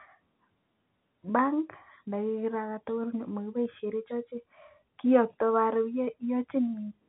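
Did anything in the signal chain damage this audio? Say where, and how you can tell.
No, nothing in the signal chain damaged this audio; the only mark it carries is the ordinary telephone-band ceiling of G.711 coding, with nothing above about 3.9 kHz.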